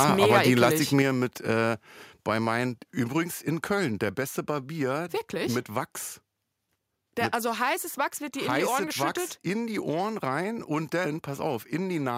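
From the very start up to about 0.69 s, the speech has a crackly, squared-off edge on its loudest moments. That's microphone overload, likely from the input volume being set too high, so the peaks ran into the converter's ceiling and got their tops sliced off. The signal was pushing roughly 4 dB past that limit, with something like one or two percent of the samples flattened, which is enough to roughen the loud syllables.

Then at 1.02 s, just before "mit äh bei meinen", the whole level drops in a single step of about 4 dB, with voice and background going down together. That's the microphone volume being stepped down, likely the call software reacting to the overload it just heard and pulling the device's input gain back in one go. You hear it as a sudden jump to a quieter level rather than a smooth fade.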